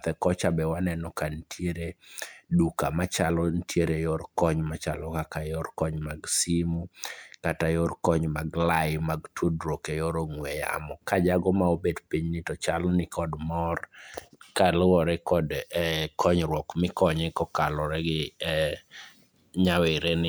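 No technical faults can be heard anywhere in the speech recording. Nothing in the signal calls for a timestamp or a closer look.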